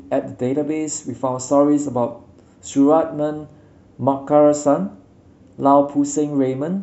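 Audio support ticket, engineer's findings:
Listened through the full speech recording and nothing stood out as a fault.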